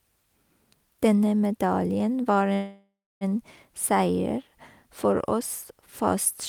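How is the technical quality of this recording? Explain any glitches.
One glitch affects the recording: a call audio freeze from 2.53 to 3.24 s. The last sound is stretched into a fading buzz or hiss, then 300 ms of silence, and the speech resumes where it stopped. Nothing is lost, but everything after is 676 ms late, likely from held-up packets draining the jitter buffer.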